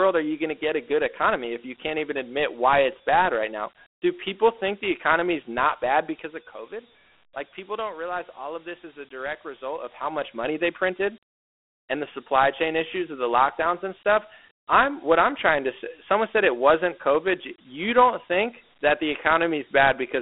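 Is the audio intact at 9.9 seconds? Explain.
No. At 9.9 seconds the sound is in the middle of zipper noise running from 9.57 to 10.40 s, just after "this is a direct" and ending before "they printed". The level falls or rises by about 10 dB, but in hard 1 dB steps at roughly ten a second instead of a smooth glide. Each jump puts a tiny discontinuity in the signal, heard as a ticking zip. A waveform shows a staircase envelope, and a spectrogram shows faint vertical lines at each step.

The same moment also carries the Dialogic VOX ADPCM coding present across the whole clip. The 4-bit adaptive coding at 32 kbps, which fits 8,000 samples a second, quantises coarsely enough to leave a gritty hiss trailing the speech, plainly audible here. The line band runs from 250 Hz to 3.5 kHz, so a spectrogram shows nothing above 3.8 kHz, a thin low end, and a grainy noise floor filling the band.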